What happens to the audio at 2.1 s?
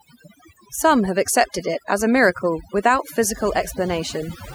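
Overdone noise removal at 2.1 s, as throughout the clip: bands near the noise estimate are cut away, leaving twinkling near-silence.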